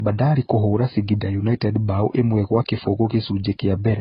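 It's a short speech clip with transcoding between lossy codecs running the whole way through. Nothing comes through above about 5.2 kHz, so it sounds dull and boxy, and there's a layered smeary, watery quality on top. That mix sounds likely to come from a very low-bitrate AAC pass, something around 16 kbit/s, later re-encoded to Vorbis at roughly 39 kbit/s. The second encode burns bits on the first one's damage, and the low cut-off never comes back.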